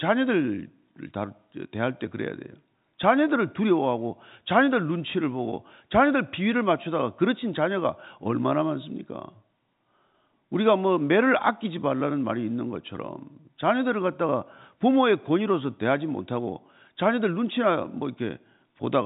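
No technical faults can be heard in this speech recording.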